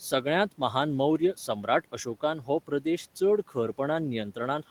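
Speech with two moments where parts of words sound swallowed and faint, from 1.18 to 1.68 s and from 2.67 to 2.86 s. This is speech cut by the noise suppressor, which mistook quiet speech for the room noise sitting about 26 dB below it. It turned down roughly a tenth of a second in each stretch, by up to about 8 dB and then about 11 dB.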